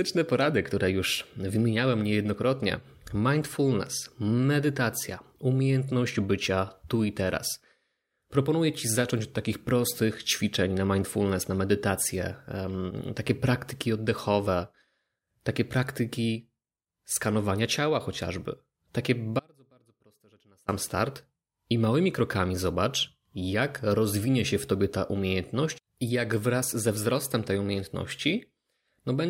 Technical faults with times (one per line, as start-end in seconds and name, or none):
19.39-20.68 audio dropout to a faint residue